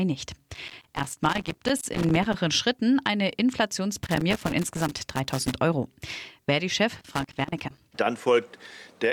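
Loose connector crackle breaks up the speech from 0.54 to 2.34 s, 3.97 to 5.55 s and 6.95 to 7.80 s, as an intermittent contact chops the signal into irregular scratchy bursts.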